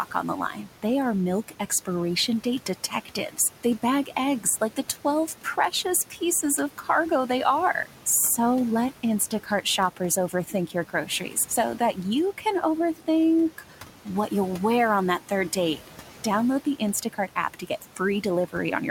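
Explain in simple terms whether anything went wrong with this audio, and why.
A noise suppressor was running throughout, turning down whatever it judged to be steady background, so noise suppressor artifacts make the leftover noise sink between words and rise under them.

Speech was cut by the noise suppressor at 0.11–0.84, 1.48–1.88, 2.44–6.19, 6.78–7.3, 9.31–14.07 and 15.2–18.54 s. Mistaking quiet parts of speech for noise, it briefly swallowed soft sounds, totalling under a second in the longest stretch. The room noise it was fighting stays well below the speech.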